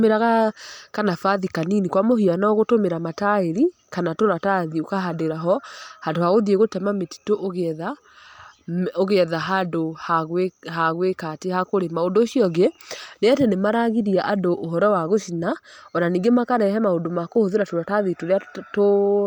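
Throughout the speech there is plainly audible transform-codec damage, most likely from Bluetooth LC3 compression. The upper spectrum has been thinned and partly replaced with filled-in noise, which gives the voice a breathy, grainy edge. The damage level fits a rate around 48 kbps with 10 ms frames. Content extends up to about 20.1 kHz, so the band is wide but the detail within it is degraded.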